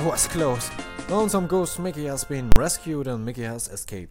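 Invalid numbers at full scale occur from 2.52 to 2.56 s. A calculation in the processing chain produced infinite or invalid values, and these were clamped to the largest positive or negative sample value, so the output is pinned at one extreme value, far beyond the audio's peaks, for a 40 ms block. The wave has no motion inside that stretch, only the sudden jumps onto and off the rail. At this length the two jumps merge into a single loud bang.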